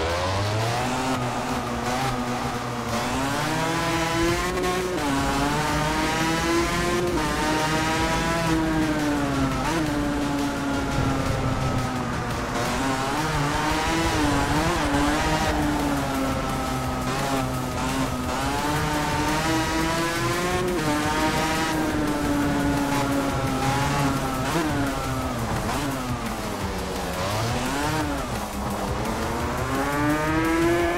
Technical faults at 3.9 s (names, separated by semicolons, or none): doubled audio track